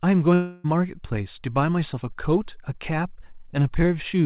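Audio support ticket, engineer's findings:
Long network dropout, 0.34 to 0.66 s. Sound breaks into a smeared, buzzy continuation of the preceding sound that fades, with no true silence, for about 0.3 s, then resumes with that stretch missing. Likely packet loss concealed by the receiver extrapolating the last audio. Call path band-limited, nothing above 4 kHz, consistent with G.711 mu-law.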